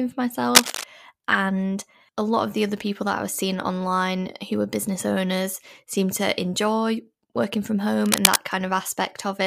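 Speech with cable scratch noise at 0.55–0.84 s and 8.02–8.39 s, just after "to enjoy working from": dense, uneven rustling somewhat louder than the voice, unlike isolated clicks, likely from a worn connector being moved.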